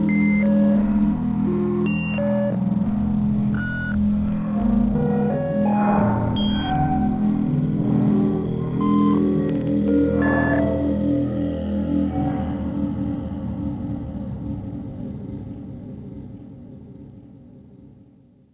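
No technical faults can be heard anywhere in these sounds.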